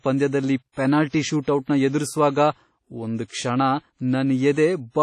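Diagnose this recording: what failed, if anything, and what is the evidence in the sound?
The codec stage failed: the speech carries heavy WMA compression damage throughout, a washy, ringing texture with hiss that breathes with the signal and nothing above 14.2 kHz. That points to a transform codec at a low bitrate, likely WMA near 32 kbps. Unlike broadband noise, it tracks the signal's level.

Pre-echo precedes sharp onsets at 0.72, 1.08, 1.42 and 3.25 s: a short hiss lasting 45 to 58 ms before each attack, which then sounds smeared. Quantisation noise spread across a long transform block leaks ahead of the transient. Reverb or echo would trail the attack instead.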